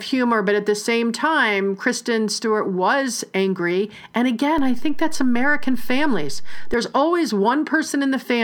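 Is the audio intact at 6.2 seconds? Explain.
No, a DC step runs from 4.58 to 6.74 s: a low thump at each edge while the speech carries on, as the waveform's zero line jumps by about -19 dBFS.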